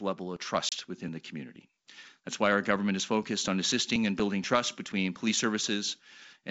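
At 0.69 to 0.73 s, packet loss on the G.722 (ADPCM) call drops about 30 ms of audio, roughly three packets. Silence fills the gap, leaving a hard-edged hole. The decoder's predictor and step size lose track of the sender's, so the speech comes back slightly distorted before it settles.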